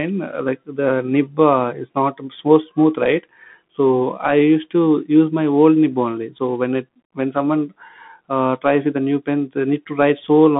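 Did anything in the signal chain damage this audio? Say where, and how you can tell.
Yes. The damage happens at the codec stage, throughout the whole recording: this is the Bluetooth CVSD headset codec. The speech sits in a narrow band of about 150 Hz to 3.6 kHz, with nothing above 3.8 kHz, so a spectrogram shows a hard, empty ceiling. A granular hiss lies under the speech. The codec encodes each sample as a single up-or-down step, which fits a 64 kbps stream. Its adaptive step can't keep pace with loud, steep high-frequency sounds, so s sounds come out scratchy.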